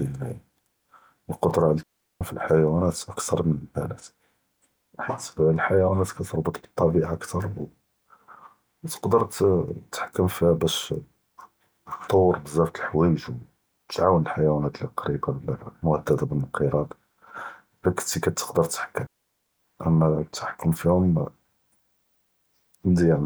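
Speech, with two digital wireless dropouts. The sound cuts to near silence from 1.83 to 2.21 s and again from 19.07 to 19.59 s. The gaps last about 0.38 and 0.52 s. The receiver lost too much data and muted with a quick fade. No noise bursts surround either hole.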